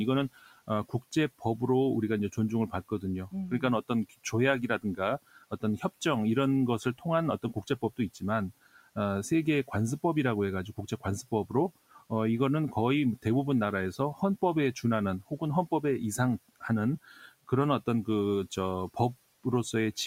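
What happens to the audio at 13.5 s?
Nothing goes wrong at 13.5 s; the speech is intact there, with only the room's own background noise sitting about 27 dB below it.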